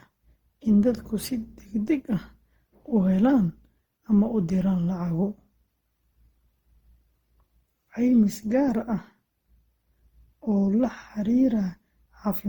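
Throughout, the speech was likely decoded and re-encoded around ten times through Opus at 48 kbit/s, a case of generation loss. Each pass requantises on a shifted frame grid, so the artefacts pile up: swirly, hollow, smeared tone and blurred consonant attacks, despite content reaching 20.1 kHz.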